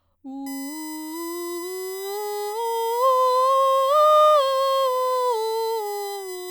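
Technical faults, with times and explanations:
0.46 to 6.50 s, USB whine: a steady, fixed-pitch whine enters under the music and holds to the end, built on a 1 kHz tone with its strongest component up at 16 kHz and sitting roughly 20 dB below the music. The cause is the USB bus drawing current in regular 1 ms frames; that periodic load leaks into the audio through shared power or ground, producing the 1 kHz fundamental and its harmonics.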